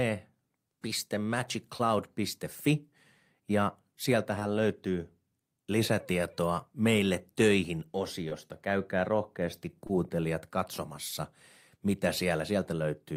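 At 1.77, 4.39, 8.29 (after "lisätietoa meille töihin") and 9.87 s (before "katsomassa mitä"), short concealed packet loss: about 20 ms of speech arrived too late, so the decoder extended the previous sound and crossfaded back. Each gap sounds like a brief smear. On a spectrogram, the preceding sound is briefly held flat, with no waveform dropout.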